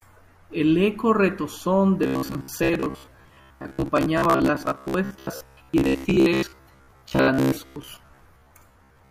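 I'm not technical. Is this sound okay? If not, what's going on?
No. From about 2.03 seconds to the end, the voice turns into a stiff, metallic buzz. This is robotic sound from repeated short buffers. Fresh audio likely arrived too slowly, so the software filled each gap by replaying the last tiny slice, about 15 milliseconds long. Roughly half of what you hear is these repeats, and the real sound in between is skipped. The constant looping adds a fixed hum near 67 Hz.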